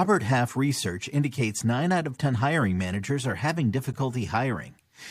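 It's a speech clip with a gap between stream segments at 3.93 s, right after "hiring managers are having": a hard-edged dropout of about 9 ms where the player pads a timestamp mismatch with silence. Nothing's lost, and the timing fits 4-second segments.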